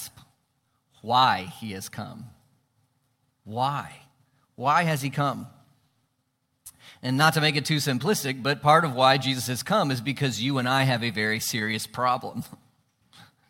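No dropouts, clicks, distortion or timing errors are audible anywhere in this speech recording.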